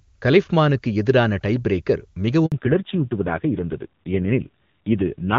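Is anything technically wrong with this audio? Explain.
Yes, there are two related problems. Right after "கலிஃப்மானுக்கு எதிரான டைபிரேக்கர்", a handover gap runs from 2.46 to 2.52 s: the call switched networks and no frames arrived for 60 ms, so the sound just drops out. From 2.52 s to the end comes a fallback to narrowband: the link fell back from HD Voice to an older codec, cutting everything above 4 kHz. The sound goes dull and rougher, which fits a low narrowband rate of around 5.9 kbit/s after clean wideband at about 23.85 kbit/s before.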